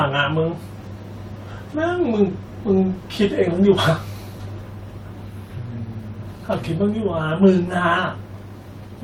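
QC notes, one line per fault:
No faults were found in the speech. There is nothing to flag on this clip.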